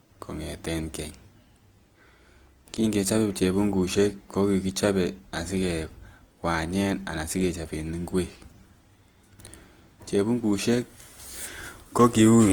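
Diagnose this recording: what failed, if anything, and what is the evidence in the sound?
Throughout the speech the sound is grainy and rough, with a noisy, hashy texture where tonal detail should be, yet the top end still reaches about 20.1 kHz. This points to the codec stage, likely Opus compression in its music (CELT) mode at a low rate, around 24 kbps. Short of bits, it fills bands with folded or noise content instead of leaving holes.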